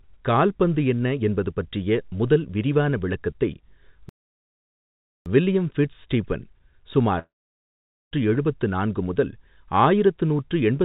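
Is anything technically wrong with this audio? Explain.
Yes. This speech clip, which comes through a G.711 mu-law call path with nothing above 4 kHz, has two faults.

Playback stall, 4.09 to 5.26 s: right after "பற்றிய முதல் விரிவான விளக்கத்தை" the output simply stops for about 1.17 s, likely because the player ran out of buffered data or its thread was blocked. No sound is produced until it recovers. Speech then resumes at "வில்லியம் ஃபிட்ஸ் ஸ்டீபன்".

Long network dropout, 7.19 to 8.14 s: about 0.93 s of audio never arrives, likely from lost packets. The receiver stretches the last sound into a fading buzz, filling about 0.92 s in all, of which roughly 0.84 s has faded to silence. When speech returns at "எழுபத்து நான்கு முதல் ஆயிரத்து", the missing stretch is simply skipped rather than replayed.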